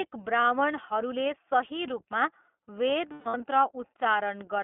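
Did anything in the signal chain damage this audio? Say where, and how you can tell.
Yes. The iLBC codec is at work through the whole clip, at the codec stage. The audio is confined to a telephone band of roughly 250 Hz to 3.4 kHz, with nothing reaching above it. The speech has a plainly audible rough, synthetic edge. iLBC codes the excitation of each 20 ms frame independently of its neighbours, so fine waveform detail is lost frame by frame, and the texture fits its 15.2 kbps mode.

Lost iLBC frames occur at the network stage, from 3.12 to 3.41 s. About 220 ms of audio is missing, scattered across a 280 ms stretch, and the longest unbroken gap is about 150 ms. In those holes the decoder repeats the last pitch cycle blended with noise, so the sound turns into a held, slightly buzzy, breathy tone. Because each iLBC frame stands alone, the speech snaps back to normal as soon as packets resume.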